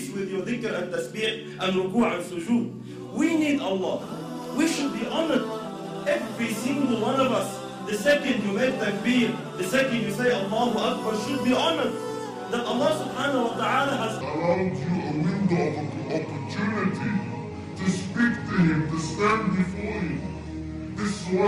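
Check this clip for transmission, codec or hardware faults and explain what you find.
One fault stands out: a section at the wrong speed. From 14.21 s to the end, the sound plays at 0.716 times its proper rate, dropping about five semitones and dragging. It is likely a resampling or clock mismatch during editing or playback. Because tempo slows along with pitch, it is not a pure pitch-shift fault.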